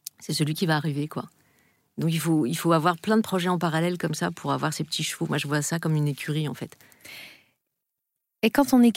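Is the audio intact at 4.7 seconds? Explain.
No. At 4.7 seconds the speech sits inside a stretch of channel delay (comb filtering), running from 4.10 to 5.10 s. One channel lags the other by a tiny amount, around 0.02 ms, which points to a delay of about one sample. When the two channels fold to mono, shared content cancels at evenly spaced frequencies. With so short a lag, the first notch falls near 20 kHz. The result is a slightly dulled, softened top end.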